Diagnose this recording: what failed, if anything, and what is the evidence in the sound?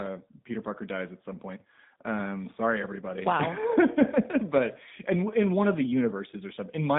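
The codec stage failed: plainly audible G.729 codec damage runs through the whole speech clip. A spectrogram shows a hard ceiling near 3.7 kHz and little below 150 Hz. Speech sounds rough and synthetic because pulse-coded excitation rebuilds the voice, consistent with an 8 kbit/s G.729A stream.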